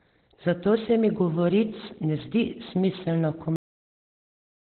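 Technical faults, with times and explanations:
Throughout, Opus compression: muffled, hoarse sound with nothing above 4.2 kHz, likely Opus in narrowband SILK speech mode, consistent with a low bitrate near 12 kbps.
3.56 s, cut-off end: the sound stops mid-sound and drops straight to digital silence with no decay, because the final buffers were never written or played out.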